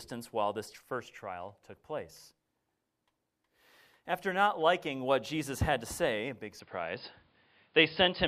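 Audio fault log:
6.60–8.27 s, input switched to a poorer device: sound turns abruptly dull with no gap, nothing above 5.1 kHz, level shifts about 5 dB, and a faint new noise floor appears. The spectrogram shows a sudden flat ceiling and the waveform a step in level, likely from a change of input device.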